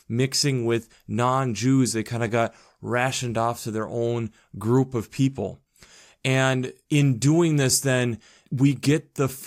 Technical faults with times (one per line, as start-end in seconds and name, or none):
none